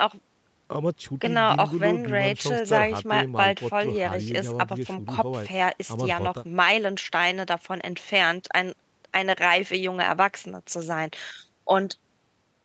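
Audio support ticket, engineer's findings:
No faults found; speech passes call mic processing and the Opus call path as expected, with content topping out at 8 kHz, consistent with the codec's bandwidth setting.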